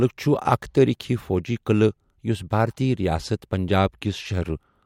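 No technical faults are audible.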